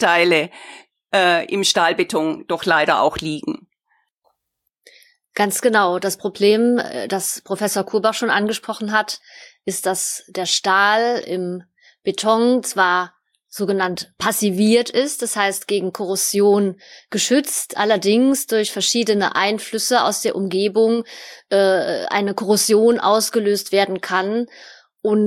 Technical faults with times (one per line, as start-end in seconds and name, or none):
none